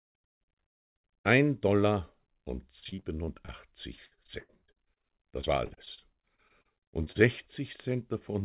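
From 2.8 to 3.5 s, and again from 3.96 to 7.17 s, there's repeated packet loss with that robotic sound. Holes keep arriving, each papered over by stretching the last bit of audio, so about a quarter of each stretch is patched. The longest gaps are around 42 ms and then 85 ms, which makes it choppy, all on top of a narrowband path that stops at 4 kHz.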